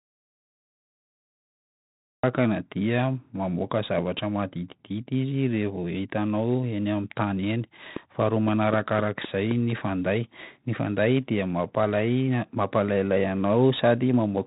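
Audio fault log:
Throughout: 4-bit ADPCM compression. Each sample is coded as a coarse 4-bit step from a prediction, so a gritty hiss rides on every loud syllable and sharp onsets distort where the step size lags. Heavy damage, consistent with a 32 kbps stream. Nothing above 3.8 kHz survives, which dulls the speech.
0 to 2.24 s: audio dropout to silence. The clip opens in silence with no room tone, the input most likely lost or muted while silence was still written. Speech returns abruptly mid-flow with "dia mamoaka zavatra". Whatever preceded that point is gone.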